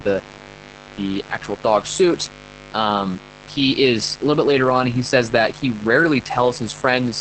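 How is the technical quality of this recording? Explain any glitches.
The quality is poor, with two faults running through the whole recording.

Mains buzz: A steady, raspy buzz sits under the speech from start to finish, fairly loud at roughly 20 dB below it. Sharp switching spikes from a dimmer, rectifier or poor shielding feed 50 Hz harmonics reaching well up the spectrum, producing the coarse edge rather than a pure hum.

Opus voice compression: The speech sounds muffled, hoarse and slightly robotic throughout, with the buzz turning burbly. Nothing is heard above about 8.6 kHz. The heavy damage fits Opus in its SILK speech mode at a low bitrate, near 10 kbps, coding the excitation coarsely within a wideband limit.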